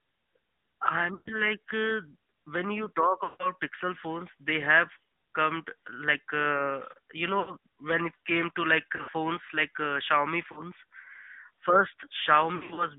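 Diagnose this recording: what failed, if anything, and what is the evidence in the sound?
Codec stage: the speech carries AMR narrowband mobile codec damage. The band is confined to roughly 150 Hz to 3.6 kHz with nothing above 4 kHz, and a buzzy, synthetic texture runs throughout. This fits the 10.2 kbps mode's coarse pulse-driven vocal tract model.

Network stage: lost AMR speech frames at 1.14–1.34, 3.24–3.55, 4.94–4.97, 7.40–7.54, 8.96–9.14, 10.52–10.60 and 12.56–12.86 s. The decoder reuses the last good pitch and vocal tract settings at falling gain, so the longer gaps stretch and fade.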